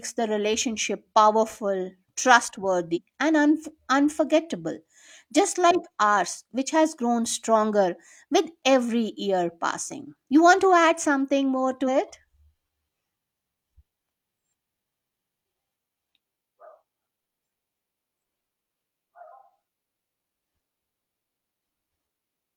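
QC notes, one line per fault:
2.92–2.98 s, compressed frames skipped: the speech jumps forward by about four frames, roughly 150 ms of audio, leaving an audible break at the join. With a frame length of 42.7 ms, whole frames never reached the output.
11.84–11.89 s, compressed frames skipped: a smaller jump of about two frames, around 100 ms, is again heard as a break at the join.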